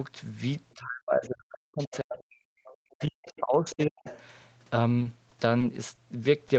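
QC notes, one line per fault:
0.75–2.47 s and 2.73–4.07 s, speech suppressed in double talk: The echo canceller likely lost track of which signal was the local talker and which was loudspeaker echo while both sides spoke, so it pulled the whole microphone signal down. The speech sinks by as much as about 40 dB, dulls and drops out in pieces, for roughly a second and a half in the first stretch and about a second in the second.
1.79–1.99 s, 2.64–2.73 s, 3.36–3.40 s, 3.70–3.75 s and 4.05–4.23 s, other side's voice leaking through: Residual loudspeaker pickup likely slipped past the echo canceller and stayed in the microphone signal. It is heard as brief scraps of a second voice sitting about 20 to 25 dB under the main speech. These fragments cluster around and inside the suppressed stretches, with the longest lasting about 0.2 s.
4.99–5.99 s, repeated packet loss (robotic sound): Over this second, packets went missing again and again, and each hole was bridged by extending the previous sound. 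The result is five brief patches, none longer than 20 ms, covering about a tenth of the span. This gives the band-limited Opus speech, which already tops out at 8 kHz, a choppy edge with small pieces gone.
6.48–6.52 s, short stall from a late packet: One packet arrived behind schedule and the jitter buffer ran dry. The receiver held the last sound for about 20 ms until the packet arrived, then carried on from the same point, so nothing is lost. What you hear is a faint drag or buzz on a sound near the end of the clip.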